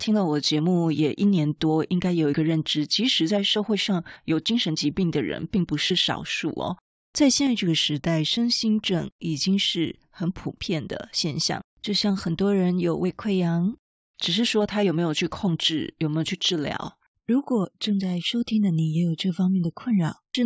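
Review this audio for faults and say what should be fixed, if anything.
No faults found; nothing to fix.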